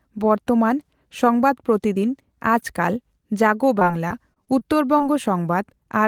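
From 3.79 to 5.02 s, repeated packet loss leaves gaps up to 21 ms, each patched by stretching prior sound, making the speech choppy.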